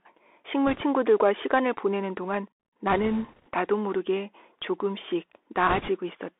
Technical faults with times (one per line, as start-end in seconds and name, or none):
0.00-6.39 Bluetooth CVSD headset codec
0.67-0.81 bit errors on a Bluetooth voice link
2.91-3.49 bit errors on a Bluetooth voice link
5.69-5.90 bit errors on a Bluetooth voice link